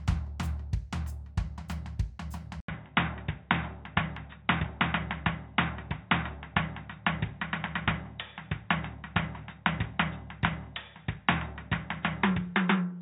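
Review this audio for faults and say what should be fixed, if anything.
At 2.6 s the music drops out for 80 ms, then returns with nothing above 3.8 kHz, a level shift of about 5 dB and a new noise floor, likely an input switched to a poorer device; the gap and changed noise set it apart from a simple low-pass filter. Locking the recording input so the system cannot swap devices mid-take would prevent this.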